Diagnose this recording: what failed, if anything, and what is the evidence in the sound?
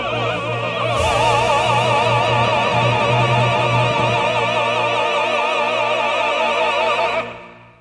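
Nothing failed: no stage in the chain, from analogue wiring through conversion, buffering, codec, network and storage to playback, leaves any audible evidence of a fault anywhere in the recording.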